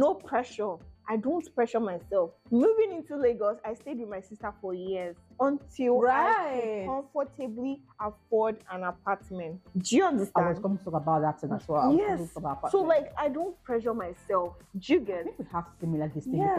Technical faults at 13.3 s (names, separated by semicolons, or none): none